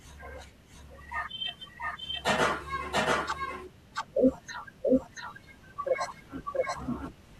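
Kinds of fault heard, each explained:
Doubled audio track: a second full-band copy of the speech runs throughout, trailing the original by roughly 0.7 s at about the same loudness, so every phrase is heard twice. The repeat carries no decay or added room colour, which separates it from reverberation or an acoustic echo. It is likely a second capture of the same signal through a slower path, or an edit that left two copies out of step.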